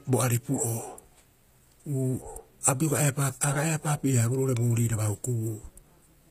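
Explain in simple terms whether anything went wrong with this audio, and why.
Yes, something went wrong, and it runs through the whole recording. The hiss-like parts of the speech, such as s and sh sounds, come out gritty, metallic or lisping, and the top of the sound stops entirely at about 15.4 kHz. That pattern points to HE-AAC compression as the likely cause: the encoder keeps only the lower part of the sound and invents the treble by copying lower bands upward, so the rebuilt highs never quite match the real ones.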